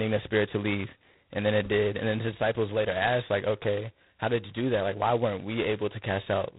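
Throughout this speech clip the audio has been squeezed through G.726 ADPCM at a very low bit depth, which fits 16 kbit/s. So few bits per sample leave heavy quantisation error, heard as a harsh, rasping hiss that rises and falls with the speech, and nothing passes above 3.9 kHz.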